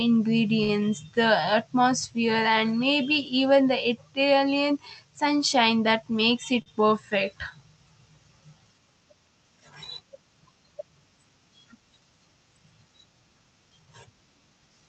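Speech carried over a call path, with the top end stopping at about 8 kHz, which fits Opus at roughly 32 kbps. Two short stalls from a late packet occur, at 0.63 to 0.71 s and at 6.62 to 6.68 s. In each, the jitter buffer ran dry, so the receiver stretched the last sound by 57 ms and then 41 ms, and resumed where it left off with nothing lost. A spectrogram shows the harmonics frozen into flat horizontal lines over those spans, and the waveform shows the same pitch period repeated with a slight amplitude dip. Two jitter buffer speed-ups also appear, at 5.91 to 6.60 s at 107% speed and at 13.70 to 14.05 s at 112%. In each, the receiver trimmed roughly 50 ms of pitch-period slices to reduce built-up delay, so the speech sounds hurried while its pitch stays the same. On a spectrogram the syllables look squeezed in time but the harmonic spacing is unchanged, and the waveform shows shortened runs of periods with tiny splice points.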